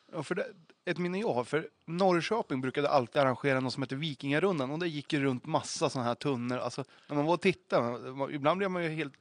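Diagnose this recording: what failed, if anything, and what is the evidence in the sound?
Nothing in the chain has failed: the speech comes through intact, with only the room's own background noise sitting about 52 dB below it as part of the recording.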